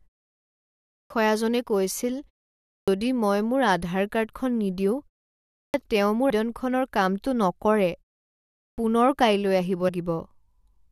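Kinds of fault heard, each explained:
Clipped start after a pause: The playback device dozes during silence and needs a moment to wake. Speech resumes abruptly at 0.77, 2.55, 5.46 (after "মোৰ আধাৰ কাৰ্ডখন নিদিও") and 8.5 s (before "পুনৰ কাইলৈ"), each time losing roughly 0.28 to 0.33 s of onset.
Compressed frames skipped: Whole blocks of coded audio go unplayed, so the sound jumps forward. At 6.29 s roughly 300 ms vanishes, and at 9.88 s, after "পুনৰ কাইলৈ", roughly 150 ms. The frames are 21.3 ms long.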